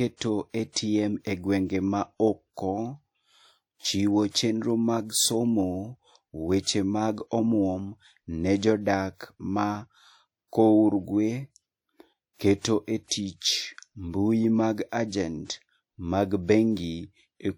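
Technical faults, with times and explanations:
0.70–0.76 s, 4.32–4.35 s and 12.60–12.65 s, pre-echo: A short hiss rises just before three sharp speech onsets, including those before "e gwenge" and "chenro mag". It lasts about 57 ms, 25 ms and 50 ms. Each attack then sounds soft and smeared. The codec spread its quantisation noise across the whole transform block. That noise was sized for the loud attack. So it also filled the quiet moment just before it.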